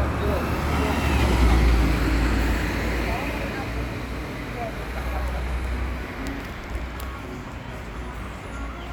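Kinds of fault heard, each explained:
No technical fault can be heard anywhere in the recording, and the signal stays steady and intact throughout.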